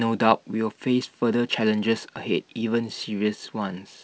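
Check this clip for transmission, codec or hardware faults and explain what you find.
Nothing stood out on listening to this speech, which comes through as wideband telephone audio consistent with G.722 coding at 64 kbit/s.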